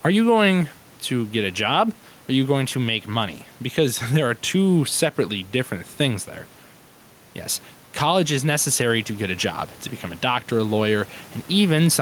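Gain pumping runs through the whole clip: the room noise, sitting about 30 dB under the speech, swells in the pauses and ducks a few dB whenever speech comes in, likely from gain set too high and a fast limiter clamping down.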